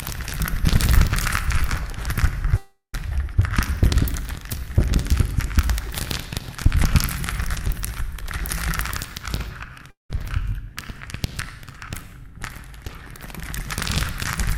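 A recording of sounds with two gaps where the audio simply goes missing. From 2.57 to 2.94 s, about 0.36 s, the last bit of sound is stretched out as a fading buzz or hiss that drops to silence for roughly the final 0.13 s. The same happens from 9.90 to 10.10 s, about 0.19 s, with around 0.15 s of silence. Each time the sound picks up further along, skipping the lost part, which points to a likely long network dropout.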